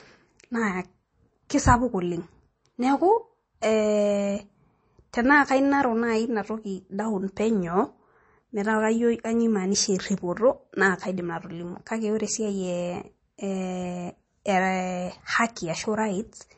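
From start to finish the speech sounds watery and plainly swirly, with brittle, chirping s sounds and softened consonant attacks, and nothing at all above 8.3 kHz, so the top end is dull. This is likely MP3 compression at a starved bitrate, one that fits roughly 32 kbps. Short of bits, the encoder chopped the treble at a fixed point and dropped quieter frequency detail that flickers in and out between frames.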